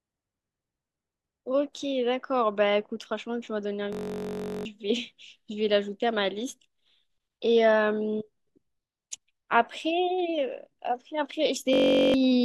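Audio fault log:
3.93–4.65 s, system hang loop: the same 21.33 ms slice of speech repeats 34 times, which fits a 1024-sample buffer cycling while the system stalled. This gives a steady 46.9 Hz buzz, and roughly 0.7 s of audio is lost. The waveform shows identical repeating cycles, and the spectrogram shows evenly spaced horizontal harmonic lines about 47 Hz apart.
11.73–12.14 s, system hang loop: the same 21.33 ms buffer freeze recurs, repeating 19 times as a 46.9 Hz buzz. Roughly 0.4 s of audio is lost. It looks like the first event: a periodic waveform and a dense harmonic comb on the spectrogram.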